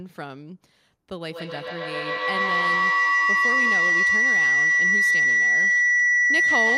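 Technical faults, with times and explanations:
1.3–6.77 s, feedback howl: two devices in the same room share the call, so sound loops from microphone to loudspeaker and back, gaining level each pass. The tone narrows to around 2 kHz, pulses roughly every 150 ms, and peaks about 11 dB above the speech.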